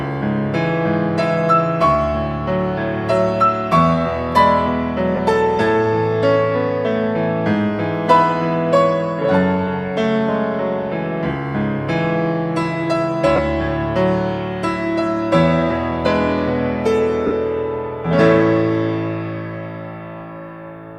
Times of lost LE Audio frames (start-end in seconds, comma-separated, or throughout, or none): 5.16-5.19, 13.36-13.39, 17.27-17.31